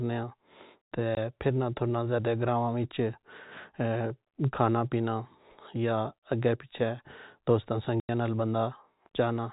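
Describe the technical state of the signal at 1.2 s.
Packet loss filled with silence from 1.15 to 1.17 s, just before "پھرنا تھرنا زیادہ گراواں": a hard 20 ms gap, fitting two 10 ms packets, with hard edges rather than concealment's smoothed fill.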